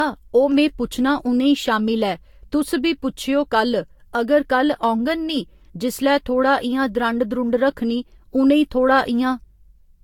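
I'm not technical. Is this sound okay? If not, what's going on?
No. Generation loss runs through the whole recording. It sounds swirly, smeared and hollow, with blurred starts to syllables, most likely because the speech was squeezed into a compressed format about five times over, each round adding fresh damage on top of the last.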